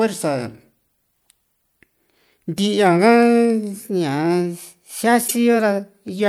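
The clip is speech with two faults. From 3.81 to 6.19 s, the audio plays about 6.3% fast and rises about 106 cents, roughly a semitone, before snapping back. The likely cause is a drift correction step, where clock-matching software briefly shifted the playback rate to balance its buffer. From 5.28 to 5.31 s, a short burst of misplaced energy cuts in, peaking near -10 dBFS. This is a corrupt frame decoded. Damaged bits in what sounds like a single compressed frame were played anyway, so the decoder put sound at the wrong frequencies.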